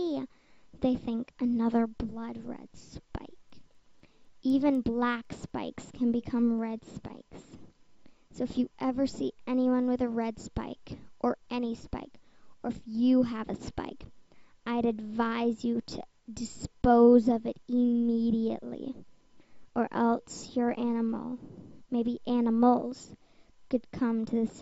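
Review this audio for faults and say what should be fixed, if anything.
From 3.25 to 5.5 s, a resampler restarted on every block produces regular ticks at 4 Hz. Each 250 ms block is converted without its neighbours' samples, consistent with a 16 kHz to 48 kHz conversion. To prevent it, keep the resampler's filter state running across block boundaries instead of reinitialising it per block.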